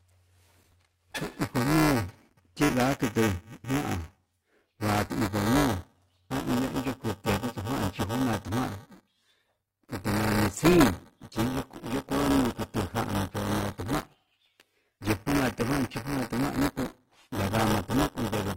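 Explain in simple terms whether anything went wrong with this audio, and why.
Buffer tearing runs through the whole recording. The program filling the playback buffer and the sound hardware reading it have fallen out of step, so every time the hardware reads a chunk, a small slice of it still holds audio from about a hundredth of a second earlier. Those hard joins repeat 345 times a second, which fits a 128-sample buffer, giving a steady robotic buzz on the speech that disappears in silence.

An adaptive stream at a lower bitrate takes over from 9.05 s to the end. Partway through, the stream switched to a cheaper, lower-quality version, likely because the connection slowed down. The change is abrupt and leaves no gap: compression artefacts become more noticeable for the rest of the clip.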